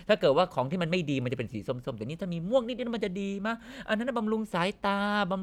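No technical faults are audible anywhere in the recording.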